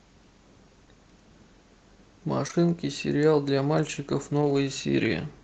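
Short concealed packet loss occurs at 2.47 to 2.51 s and again straight after, at 2.51 to 2.55 s, where two back-to-back gaps of about 20 ms each never arrived in time. The decoder bridged each hole by extending the preceding sound, following its pitch where it was voiced and substituting shaped noise where it was not, then faded back into the real signal. The result is a brief smeared wobble lasting a few hundredths of a second.

A lost packet rebuilt from error correction follows at 4.41 to 4.55 s. Here roughly 80 ms of audio went missing, which fits a run of about four separate packets. Each packet that did arrive carried a low-bitrate backup of the one before it, and the decoder played those backups instead, so nothing drops out. That stretch sounds coarser and grainier than its surroundings, a short patch of rougher, noisier coding within the call's 8 kHz-limited Opus sound.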